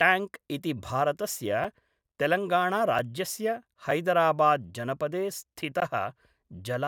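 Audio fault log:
1.64 s, 2.99 s, 3.91 s, 5.80 s: block of digital silence. The speech drops to silence four times, then resumes. The first three holes are short, at 5 ms, 3.9 ms and 5 ms. Each is heard as a tick. The last lasts 16.7 ms and sounds like a brief pop with a tiny gap. There is no fade at either edge. The waveform jumps straight to zero and back.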